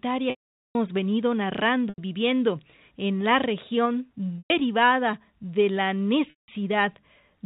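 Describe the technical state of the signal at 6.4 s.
At 6.4 s the signal is inside a packet loss with pitch repetition that runs from 6.30 to 6.48 s, right after "de la". About 180 ms of audio is missing, which fits six 30 ms packets. The receiver fills the hole by repeating the last pitch period, so a brief held, buzzy tone appears, fades out over roughly 50 ms, leaves silence, and then cross-fades back into speech. A plain dropout would cut straight to silence with no sustained tone first.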